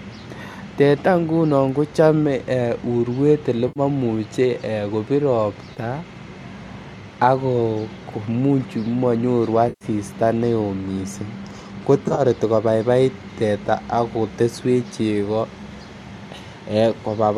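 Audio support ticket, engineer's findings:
AAC frame loss with concealment, 3.68–3.80 s, 5.74–5.78 s, 9.69–9.85 s and 12.04–12.21 s. Smeared, phasey patches of about 80, 30, 120 and 90 ms, the last broken into short runs over 140 ms. The decoder rebuilds gaps from the last good spectrum. Spacing fits 10 ms frames, likely from the AAC-ELD link.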